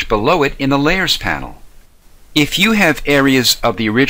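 No technical faults are audible.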